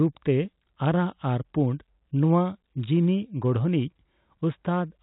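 Nothing stood out on listening to this speech recording, which comes through the narrow band of ordinary G.711 telephone coding with no more than a faint trace of its quantisation noise.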